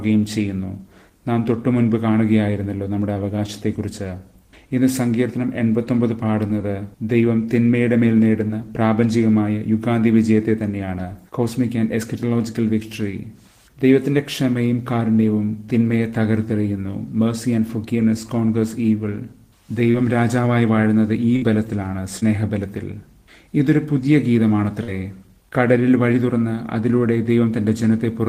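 Short concealed packet loss first appears at 3.13 s, then at 6.47, 8.47 and 19.91 s. Each time about 20 ms of audio arrived too late to decode, and the receiver bridged the hole by extending the preceding sound before blending back, leaving a brief smear or wobble.

A burst of packet loss at 21.36 s removes about 60 ms. The receiver carries the last sound forward while fading it, producing a short held buzz or dying hiss, then the audio resumes further on with that stretch missing.

Short concealed packet loss returns at 22.20 s, again about 20 ms, and at 24.83 s, where roughly 40 ms is patched, making that smear longer.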